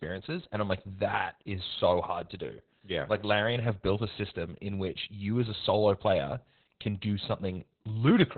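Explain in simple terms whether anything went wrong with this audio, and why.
Opus voice compression runs throughout the speech, squeezing it so hard that everything above about 4 kHz is lost, leaving it muffled, hoarse and slightly robotic.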